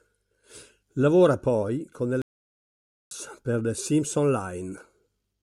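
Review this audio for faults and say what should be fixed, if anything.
A playback stall cuts the speech off from 2.22 to 3.11 s. The output falls silent for 0.89 s, then resumes. The player likely starved of data or had its thread blocked. A deeper playback buffer and a non-blocking audio thread would prevent this.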